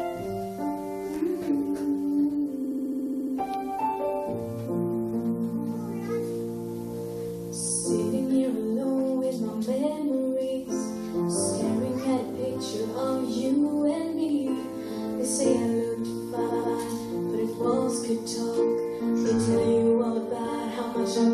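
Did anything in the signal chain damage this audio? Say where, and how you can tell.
Yes. Repeated frames point to the codec or storage stage. From 2.64 to 3.33 s, a 69.7 ms block replays ten extra times as a rapid stutter. From 16.48 to 16.75 s, a 139.3 ms block repeats twice. The audio runs longer.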